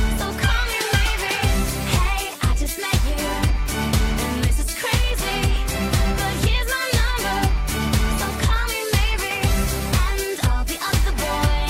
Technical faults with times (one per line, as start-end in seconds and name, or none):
none